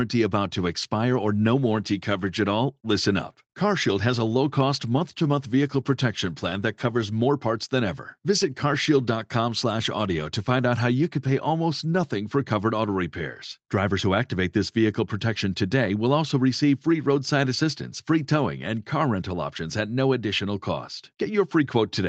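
No faults can be heard in the speech, which has passed through a call's microphone processing and codec path, with the content stopping at about 8 kHz as fits an Opus call in wideband mode.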